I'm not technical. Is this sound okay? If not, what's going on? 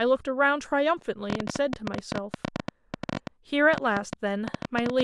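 No. From 1.3 s to 5.01 s a train of clicks, about 40 at an uneven ten per second, ticks over the speech, likely interference from nearby equipment.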